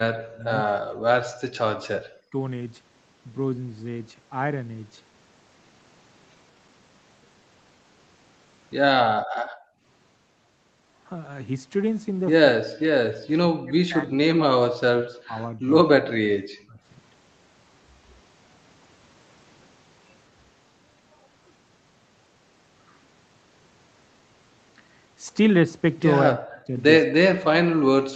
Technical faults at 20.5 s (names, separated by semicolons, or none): none